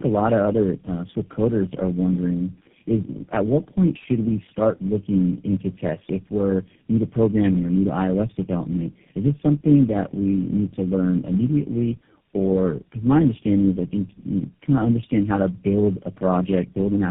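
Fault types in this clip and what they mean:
Tandem speech coding: The call has been squeezed through several low-rate speech codecs in a row, decoded back to plain telephone audio between each, so every coder is working on the previous one's damage. It sounds rough, muffled and warbly throughout, worse than a single codec would leave it, with nothing above about 3.6 kHz. The character fits GSM full-rate coders at either end with G.729-style coders between, likely four speech codecs linked by G.711 hops.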